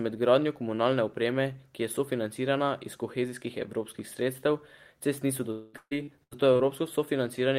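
A speech recording hit what is likely a long network dropout at 5.51 to 5.75 s, just after "cest niso". About 220 ms of audio never arrived, and the receiver extended the last sound as a fading buzz or hiss across the whole gap. Repeated packet loss followed from 5.77 to 6.61 s, with five separate holes, the longest 137 ms. Each was patched by continuing the previous sound, covering roughly a third of that span, so the speech turns choppy, with pieces missing.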